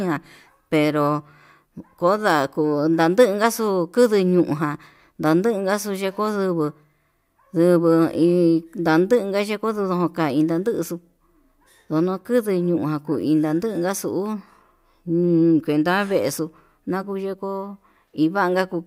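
No technical faults are audible anywhere in the speech recording.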